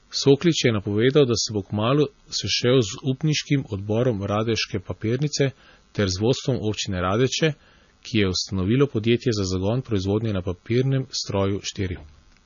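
From start to finish the speech sounds watery and swirly, with chirpy, metallic sibilants and nothing above 7 kHz. That's likely heavy MP3 compression: starved of bits, the encoder chopped the treble and let weak frequency lines flicker, which fits a bitrate around 25 kbps.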